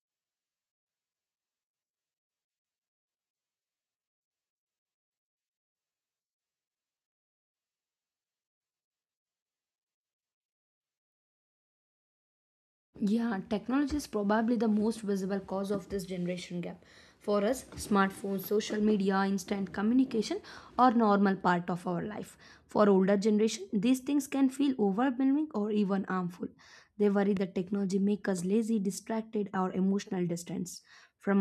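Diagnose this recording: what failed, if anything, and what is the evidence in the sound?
A single loud pop at 27.37 to 27.39 s, just before "technology make us lazy", peaks a few dB above the speech. Likely an analogue wiring or switch voltage spike.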